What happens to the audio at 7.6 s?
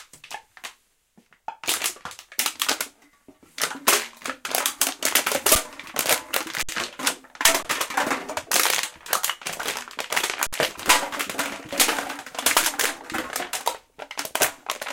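At 7.63 s the sound stops for 20 ms, until 7.65 s. This is an underrun with held sample. The output buffer ran dry, so the converter froze on its last value. The waveform goes flat without a click. Little or no audio is lost. Playback then picks up where it stopped, so the return is soft.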